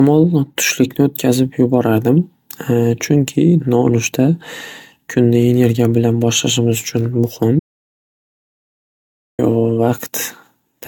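From the start the speech sounds swirly, smeared and hollow, with consonant attacks blurred and nothing above 17 kHz. That is generation loss, and the likely cause is repeated lossy coding, with the audio decoded and re-encoded about seven times in a chain that fits AAC-LC at 96 kbit/s. Each pass quantises on a shifted frame grid, so noise piles up beyond what one encode at that rate would leave.

At 7.60 s the speech cuts off abruptly into silence with no room tone, then resumes mid-flow at 9.39 s. This is an audio dropout to silence, costing about 1.8 s of the recording. The likely cause is that the input was lost, through a disconnected device, a failed link or a stray mute, while the recorder kept writing silence, so whatever was spoken in that gap is gone.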